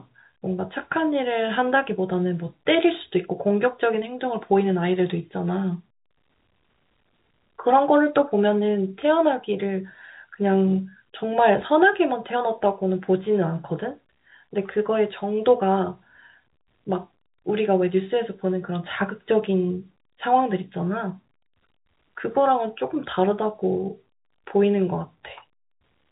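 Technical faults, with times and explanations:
No technical faults heard.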